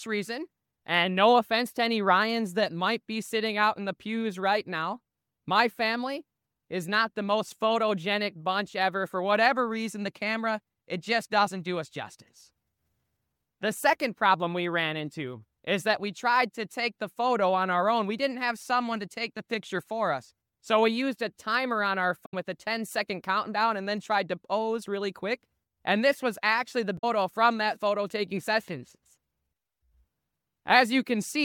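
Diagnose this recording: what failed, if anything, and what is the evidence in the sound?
The failure is damaged data in a compressed stream, at the codec decoding stage. Two short blips sound at 22.25 to 22.34 s and 26.95 to 27.04 s, each roughly a tenth of a second. Corrupted bytes there leave the decoder unable to read those frames until it regains sync.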